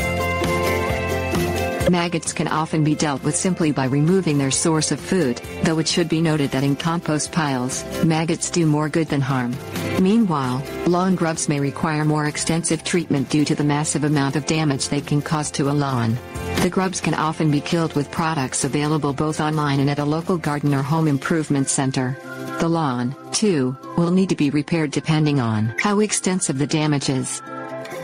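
Gain pumping runs through the whole recording: the gain ducks by around 20 dB under each loud sound, with loud and soft parts squashed together. Unlike a noise gate, it turns the level down rather than cutting to silence, likely from a fast limiter fighting excessive input gain.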